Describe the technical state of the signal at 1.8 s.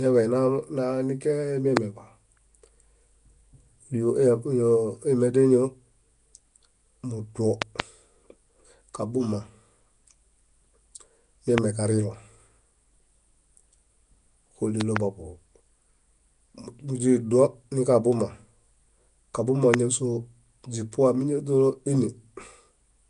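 A single sharp pop sits on the speech from 1.77 to 1.79 s, peaking roughly 20 dB above the surrounding signal while the speech carries on underneath. It sounds like a click-thump laid over the audio, not a break in it. A loud pop like this is likely a sudden voltage step or pulse, from a plug, switch, static discharge or driver glitch, added to the signal and shaped by the circuitry that followed.

Under and around that pop, the speech has a rough, hissy halo and a smeared, underwater texture, and the audio is dull, with nothing above 10.6 kHz. The damage is plainly audible. The likely cause is Nellymoser compression, the Flash-era Nellymoser Asao codec, which codes short blocks with a fixed, small bit budget. Bands too weak to earn bits are filled with noise, which produces the hiss and smearing.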